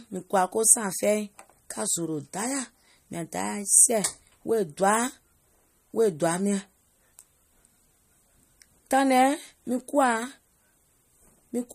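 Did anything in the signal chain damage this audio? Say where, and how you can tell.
Yes, at the codec stage, throughout the speech: nothing survives above 14.5 kHz, and weak detail flickers watery, which likely points to MP3 compression at a low rate near 45 kbps. A plain low-pass filter would cut the treble without the swirling, frame-to-frame dropouts.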